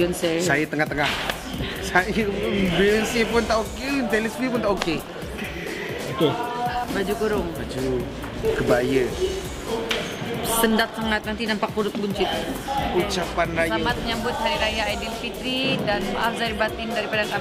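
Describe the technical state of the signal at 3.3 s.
Nothing is wrong with the signal at 3.3 s; the audio there is intact and plays without any audible fault.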